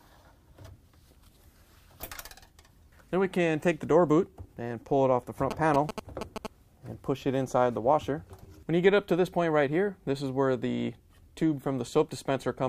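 From 5.51 to 6.47 s, a nearby 2G phone signalling its network radiates short groups of radio bursts that the audio circuitry rectifies. These GSM signalling bursts sound like a galloping dit-dit-dit of short 217 Hz buzzes, only slightly quieter than the audio.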